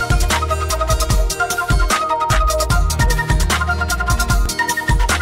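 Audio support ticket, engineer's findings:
Small forward jump in the sound at 3.00 s. A second, larger skip at 4.46 s. No gap of silence at either point. The audio on each side is butted together. Likely cause: dropped buffer (overrun) in the capture path. The application did not read the input in time, so the hardware overwrote that block. Loss is a few milliseconds at 3.00 s and several milliseconds at 4.46 s.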